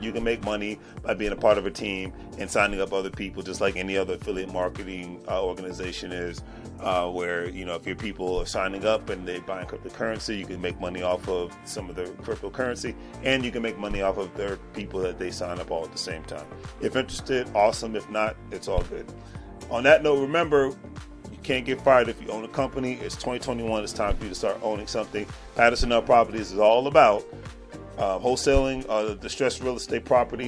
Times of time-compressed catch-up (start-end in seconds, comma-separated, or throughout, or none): none